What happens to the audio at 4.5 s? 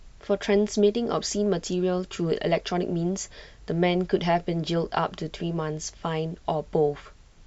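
Nothing goes wrong at 4.5 s: the speech carries on cleanly there, with no dropout, click, distortion or other fault.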